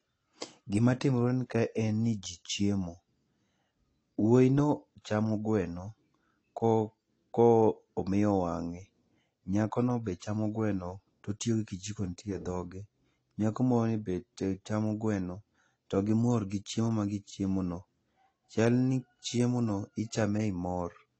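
Speech, with nothing present above about 8.6 kHz for the whole clip and the smeared, watery texture of an aggressive lossy encode sitting under every syllable. The container is MP3 at a generous rate, but that rate brings nothing back. This is likely low-bitrate audio saved at a high bitrate: the band limit and artefacts fit an earlier pass through AAC-LC at around 32 kbit/s, which the later MP3 encode simply preserved.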